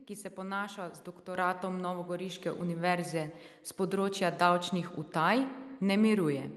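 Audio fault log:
1.35 s and 2.37 s, microphone volume stepped up: the speech and the room noise behind it both jump louder at the same instant, by about 7 dB at 1.35 s and about 2 dB at 2.37 s. The call software judged the microphone input too quiet and raised the device's input volume in a single step rather than a gradual ramp, so the level change is abrupt. The Opus call path's band limit near 12 kHz is unaffected.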